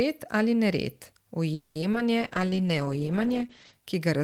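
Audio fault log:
1.53–1.77 s, call audio freeze: the sound stretches into a fading buzz for about 220 ms, then resumes exactly where it stopped, with nothing lost. This is likely packets held up until the jitter buffer ran dry. The delay it adds is what separates it from outright loss.
1.81–2.01 s, repeated packet loss (robotic sound): four brief holes, none longer than about 10 ms, are each patched by extending the previous sound. Pieces of audio go missing and the result is choppy. Unlike the freeze just before it, real content is lost.
2.22–3.79 s, call bitrate drop: the audio turns coarse and watery, and the top end is cut above 8 kHz where it had reached 20 kHz. This fits the encoder falling from about 32 to about 10 kbps. The damage is steady coloration over a long stretch rather than gaps.
2.40–2.58 s, jitter buffer slow-down: inside the low-bitrate stretch, the sound drags to about 83% speed at unchanged pitch, adding about 38 ms. 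Repeated pitch periods rebuild the buffer's reserve, so it sounds drawn out, with no hiss or holes.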